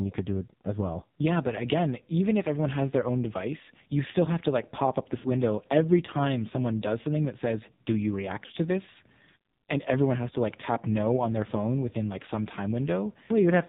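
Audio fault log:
throughout – AMR narrowband mobile codec: the speech sounds buzzy, thin and synthetic, with nothing above 4 kHz. A low-rate vocal-tract model rebuilds each 20 ms frame from a few pulses, and the heavy damage fits a mode near 6 kbps.
3.58–3.61 s, 5.18–5.28 s, 8.46–8.52 s – lost AMR speech frames: a brief dip after "everyone has their own", and drawn-out, fading sound after "to like pop up" and before "to this". Over gaps of 20, 60 and 40 ms, the decoder stretched the last good settings with falling gain.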